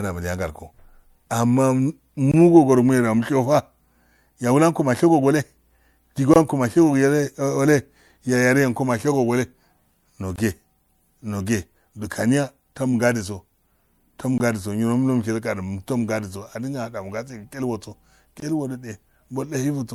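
Every 4 s or so the speech drops into a short, hard-edged hole, at 2.32–2.34, 6.34–6.36, 10.36–10.38, 14.38–14.40 and 18.40–18.42 s. Each gap between chunks lasts about 21 ms: silence is inserted at every join, so the speech is interrupted rather than lost.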